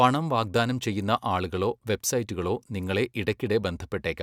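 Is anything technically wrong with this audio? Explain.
No, nothing is technically wrong with this audio.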